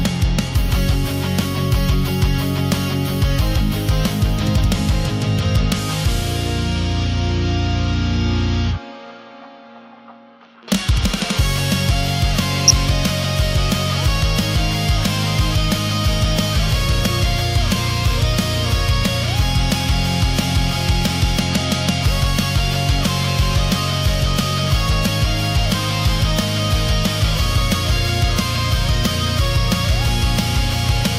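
A brief DAB burbling patch hits from 12.68 to 12.71 s, a few corrupted frames where stray bit errors put short blips of noise into sub-bands, pointing to weak reception.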